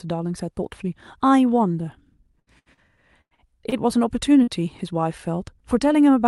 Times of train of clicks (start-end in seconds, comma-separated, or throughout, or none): none